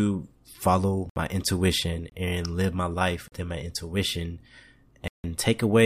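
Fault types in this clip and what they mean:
Block of digital silence: the speech drops abruptly to silence and returns with no fade. There are four holes, from 25 ms to 160 ms. One falls just before "intuition and live my". The longest ends near 5.24 s.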